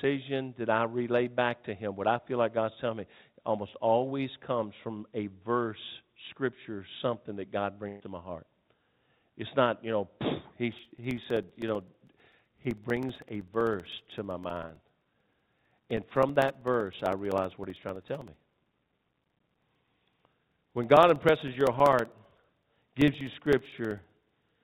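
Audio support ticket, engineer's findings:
Burst of packet loss, 7.88 to 8.02 s. The last sound gets stretched for about 120 ms and fades out. Voiced bits turn into a held buzz, the rest into a dying hiss, then the audio picks up further along with that chunk gone. Probable component: the network leg of the call, with the receiver's concealment papering over several lost or late packets. It's all going through the G.711 mu-law path, which caps everything at 4 kHz.

Periodic USB or driver dropouts, 10.73 s through 24.55 s. There's a steady tick every 64 ms, roughly 15 a second and a couple of hundred in total. Each one is a gap of around 2 ms dropped to silence, and you only hear them while there's signal. Probable component: the capture device's USB bus or audio driver, stalled on a fixed schedule by some background task.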